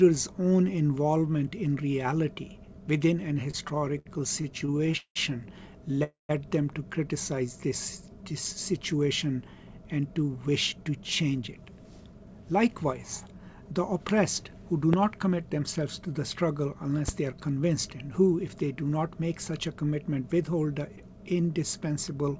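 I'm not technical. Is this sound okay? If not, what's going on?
No. Between 3.44 and 5.18 s the sound keeps catching and dragging, with 17 tiny hiccups, the longest about 0.19 s. This is repeated stalls (stutter): parts of the call arrived late, so the receiver kept stretching the last bit of sound to bridge each wait. About a quarter of that stretch is this filler, though nothing is actually lost.

From 6.04 to 6.31 s the sound briefly hangs and then goes quiet for about 0.15 s before carrying on. That is a call audio freeze, likely caused by a hold-up on the network. The receiver filled the wait, so the audio resumes exactly where it stopped.

From 7.36 to 8.55 s the sound plays slightly slow, at about 94% speed, with the pitch unchanged, so it feels a little drawn out. This is a jitter buffer slow-down: the receiver repeated tiny slivers of sound to build up a safety reserve.

From 10.37 to 14.63 s the opposite happens. 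The sound runs about 9% fast and slightly hurried, with the pitch still unchanged. This jitter buffer speed-up trimmed roughly 0.4 s of tiny slices to catch up after a backlog of delayed audio.

There is a sharp click at 14.93 to 14.96 s and a slightly softer one at 17.08 to 17.11 s, each sitting on top of the sound. These are loud pops, likely from an electrical glitch such as a plug, a switch or static.

The call line itself carries sound only up to 8 kHz, which is normal for this type of call audio.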